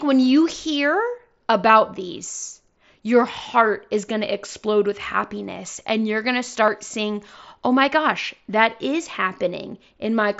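At 1.68 s, just before "these your heart is", and again at 6.67 s, between "and you're going to" and "seeing oh my gosh", the speech carries a tiny smear, a brief moment where the sound repeats itself before carrying on. These are concealed Bluetooth headset packet loss. About 7.5 ms of audio went missing each time, which fits a single lost frame on the wideband mSBC headset link, and the receiver filled each gap by copying the best-matching recent stretch of the waveform.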